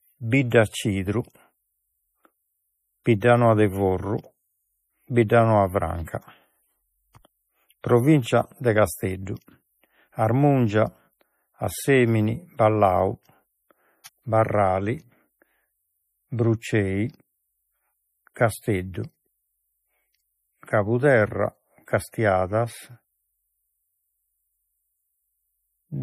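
Throughout the clip, the speech carries damage that likely comes from MP3 compression at a starved bitrate, consistent with roughly 40 kbps. The encoder removes everything above 15.2 kHz and lets weak frequency lines flicker between frames, giving a watery, swirling texture and metallic chirping on s sounds.

From 14.04 to 14.06 s, a pre-echo appears. A sharp attack sits late in a transform block, so quantisation noise sized for the loud part spreads about 20 ms ahead of it. A brief hiss precedes the onset, and the attack itself sounds softened.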